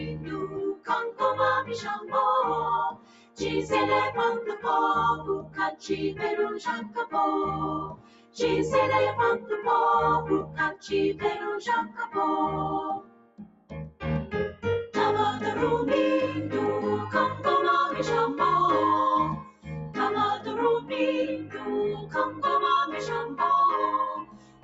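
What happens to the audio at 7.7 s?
At 7.7 s the audio sits inside a stretch of sound cut by the noise suppressor, running from 4.56 to 8.4 s. The suppressor misreads this material as noise and pulls it down harder than its surroundings, by about 17 dB at the deepest point, with roughly one and a half seconds of that window affected in total. Sustained and decaying parts sink or have their tails clipped off, while sharper onsets get through largely intact.

That dip comes from a noise suppressor applied to music or sounds, a speech-oriented processor left active across the whole clip. It treats steady content, ambience and reverberation as noise to be removed, so its attenuation rises and falls by something like 15 dB as the material changes. The result is pumping and fluttering level, with held sound thinning out between attacks. The call's microphone processing band-limits everything to 8 kHz, which is expected.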